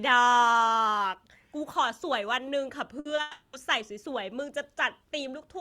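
At 2.99 s a burst of packet loss opens a gap of about 60 ms, lasting to 3.07 s. Consecutive packets failed to arrive in time, so the receiver extended the last stretch of speech and faded it down across the hole. The result is a brief held buzz or hiss where real audio should be, after which the speech picks up further along, with those 60 ms absent from the timeline.

Between 3.15 and 3.19 s there is a short concealed packet loss of about 20 ms. The decoder received nothing for that slice and covered it by projecting the preceding sound forward, pitched if voiced and as shaped noise if not, then crossfading back into the true signal. What reaches the ear is a quick smear or wobble, and a brief consonant falling in that window can disappear.

From 3.21 to 3.55 s the speech gives way to a synthetic continuation of the last sound for about 320 ms, a buzz or hiss that decays without ever dropping to silence. 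This is likely a long network dropout: no packets arrived for the whole stretch and the receiver kept generating fill until audio resumed. The speech returns further on, and the 320 ms spanned by the fill is missing.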